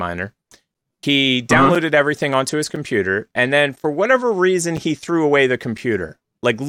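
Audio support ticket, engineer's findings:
Gap between chunks at 0.74, 1.75, 2.76 (after "everything onto his"), 3.76, 4.77 and 5.78 s. Hard-edged 6.5 ms silences, one per second, in the speech. Probable chunked playback or decoder padding: each 1.0 s block starts late, so no audio is lost but each join is interrupted.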